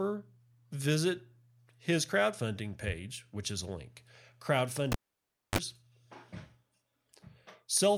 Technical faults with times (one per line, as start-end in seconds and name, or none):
4.92-5.58 cable pulled and plugged in